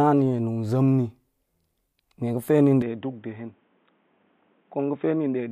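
At 2.82 s the speech abruptly goes dull and boxy and stays that way to the end. Everything above 3.8 kHz is gone, the level drops by roughly 5 dB, and a faint new background noise comes in about 40 dB under the signal. There's no gap at the changeover, just a sudden jump in tone. That's the signature of the input switched to a poorer device, likely a move to a different microphone or a headset's call profile.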